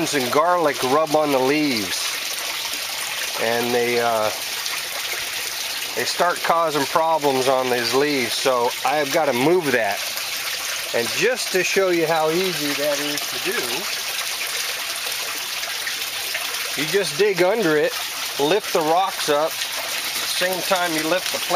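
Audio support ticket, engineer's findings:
Listened through in full; nothing stood out and no issue was found to attribute to any component.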